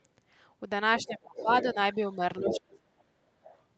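At 0.99 s a faint second voice appears under the speech, well below it. This is the other side's voice leaking through, likely because loudspeaker echo got past the echo canceller. From 1.02 to 1.49 s the speech is suppressed in double talk. The talker's level sinks by around 25 dB while both sides overlap. The canceller likely treated the overlap as echo and turned everything down. The speech thins and drops away in pieces.

The leaked voice returns from 1.36 to 1.75 s, louder now, about 10 dB under the speech. Again it is likely residual echo. At 2.16 s there is a brief, shallow dip in the speech, a small suppression likely triggered by overlapping talk.

From 2.39 to 3.16 s the suppression is far deeper, roughly 35 dB at its worst. The canceller likely clamped down hard on both voices. Inside it, from 2.45 to 2.6 s, the other side's voice leaks through almost as loud as the speech. The echo canceller likely missed it. 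Last, from 3.43 to 3.62 s, a very faint scrap of the other voice leaks in again, likely one more fragment of residual echo.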